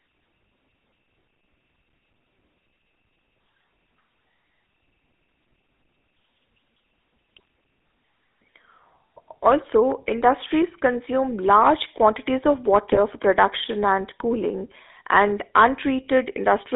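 It's a speech recording that's gone through the GSM full-rate codec the whole way. You get that buzzy, gravelly roughness from its pulse-driven vocal-tract model, and the sound sits in a narrow band of roughly 250 Hz to 3.6 kHz, which fits the old 13 kbps full-rate coder. There are also two bursts of GSM bit errors, where corrupted filter, pitch or gain values reach the decoder and the sound briefly squawks and gargles. The first is at 7.36 to 7.40 s. The second runs from 12.92 to 13.00 s, right after "consume large quantities of" and just before "for production."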